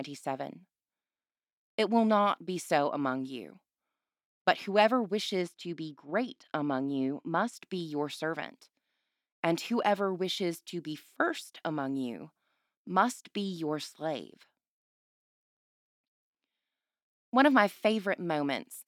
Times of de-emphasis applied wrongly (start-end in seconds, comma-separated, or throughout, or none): 5.42-7.53